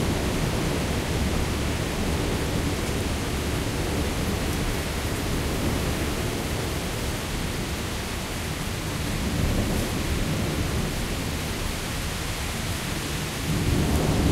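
From 0.52 s to 13.20 s a click recurs every 1.27 s, about ten in all, the pattern of clock drift buffer slips. Two clocks likely disagree by a few hundred ppm, so around fifteen samples drop or repeat each time. The waveform shows a step at each slip, and the spectrogram shows thin vertical lines.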